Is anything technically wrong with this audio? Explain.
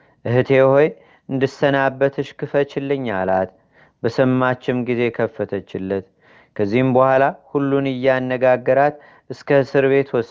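No, nothing in this speech recording stood out as a technical problem on listening.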